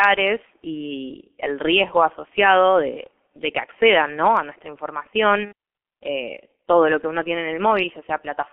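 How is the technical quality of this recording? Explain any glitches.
Quality is poor throughout, with one dropout. The whole recording carries heavy G.723.1 codec damage, consistent with its 6.3 kbit/s mode. Speech is confined to roughly 250 Hz to 3.4 kHz, so it sounds muffled and hoarse with smeared consonants. A spectrogram shows a hard ceiling and blurry, blocky formants.

From 5.45 to 5.53 s, just before "eh todo lo que", VoIP packet loss concealed by the speech codec stretches the last sound, which then fades. This fits two lost 30 ms frames (60 ms). The waveform shows a repetitive, decaying segment, and the spectrogram shows a frozen spectrum.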